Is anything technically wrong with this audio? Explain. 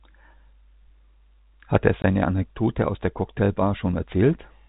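Yes. At 2.02 to 2.04 s the speech drops out completely for about 20 ms: packet loss filled with silence. A block of audio never reached the receiver, and instead of concealing the gap it played zeros. The hole's length fits a single 20 ms packet. The signal stops abruptly and resumes abruptly around a brief void. The band-limited telephone sound of the G.711 coding carries on either side of the gap unchanged.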